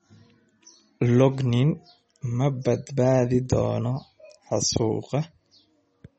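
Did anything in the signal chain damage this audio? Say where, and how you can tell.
Yes, at the codec stage: throughout, nothing sounds above 8.2 kHz and the sound turns watery, likely MP3 compression at a low bitrate around 32 kbps.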